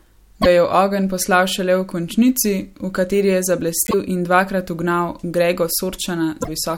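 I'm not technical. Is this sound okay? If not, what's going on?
No. There is a broken MP3 bit reservoir at about 0.41 to 0.46 s, 3.85 to 3.94 s and 6.42 to 6.48 s. Each is a brief chirp, noise burst or gap where the speech skips ahead. MP3 audio travels in small chunks, here about 26 ms each, and chunks store some of their data in the ones before. Some chunks were likely lost, so the next few pulled up the wrong data and played garbage for two or three chunks.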